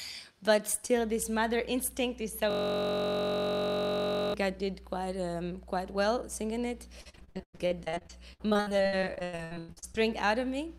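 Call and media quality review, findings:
System hang loop, 2.51–4.34 s: steady buzz at about 46.9 Hz, a 21.33 ms chunk replayed 86 times. Driver froze while the device kept cycling its ring buffer, which fits a 1024-sample buffer.

Repeated packet loss (robotic sound), 7.01–9.96 s: choppy, with dozens of dropouts up to 98 ms. Jitter buffer/concealment stretching the last sound across the holes, with about 44% of that stretch concealed.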